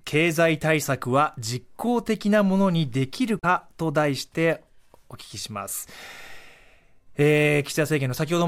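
At 3.39 s, a Bluetooth stall most likely interrupts playback: radio interference appears to have delayed packets on the wireless link, so the headphones' buffer emptied and output halted until retransmitted data arrived. In the speech this is a brief dropout between 3.39 and 3.45 s, with the audio cutting abruptly to silence for about 37 ms before the sound resumes.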